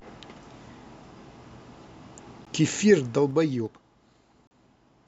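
A gap between stream segments occurs at 2.45 s. The timestamps of two adjacent pieces of the stream fail to meet, so the player fills the hole with about 14 ms of silence. The speech drops out abruptly and resumes with hard edges, but no audio is missing, only delayed. A second gap follows at 4.47 to 4.51 s, longer at about 38 ms. Both fall on boundaries about two seconds apart, which fits one-second stream segments.

Zipper noise runs from 3.01 to 3.83 s while the level falls by roughly 15 dB. Instead of gliding, the gain moves in 2 dB steps at about ten steps per second, with no smoothing between them. Each jump leaves a small click in the waveform, so a ticking, zipping texture rides on the speech for as long as the fade lasts.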